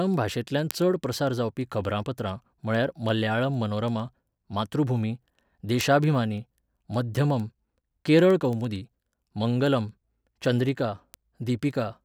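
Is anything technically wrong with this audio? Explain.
Yes. From 0.14 s to 11.93 s the speech carries word clock ticks, roughly ten per second. The receiver's clock drifts against the sender's by a couple of hundred ppm, so one sample slips each time. Unlike random crackle, these sharp ticks keep a steady rhythm.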